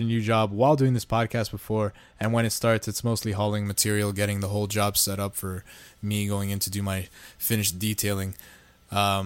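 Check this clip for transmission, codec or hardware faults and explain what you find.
From 3.66 s to the end of the speech, pre-emphasis is left on. The treble lift matches a 75 µs FM curve, and the complementary de-emphasis was never applied, so 10 kHz sits about 13 dB above 1 kHz. The result is thin, bright and sharply sibilant.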